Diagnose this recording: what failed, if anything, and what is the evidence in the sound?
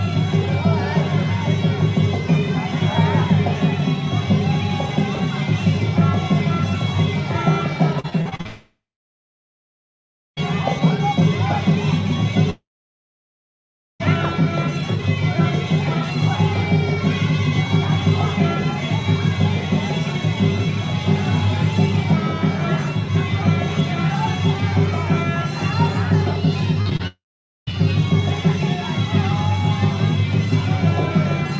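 Network stage, repeated packet loss: choppy, robotic patches from 8.00 to 8.47 s and 26.8 to 27.7 s, where concealment stretches the last sound over holes up to 38 ms.

Long network dropout, likely a network outage: the sound buzzes or hisses, fades, then goes silent at 8.47 to 10.39 s, 12.50 to 14.02 s and 27.07 to 27.73 s, resuming with material missing.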